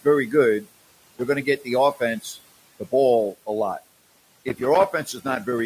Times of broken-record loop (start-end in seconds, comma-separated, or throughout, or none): none